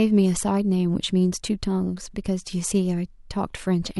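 Nothing in this speech recording points to a technical fault: the signal holds together with no audible breaks, distortion, or disturbances at any point.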